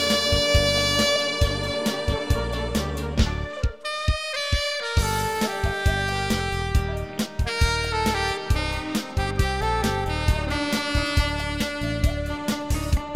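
At 1.15 s and again at 11.60 s there's a short blip from damaged data in the compressed stream. The decoder hits corrupted bytes, misreads those frames and loses sync until it finds the next frame header, so each one comes out as a tiny glitch.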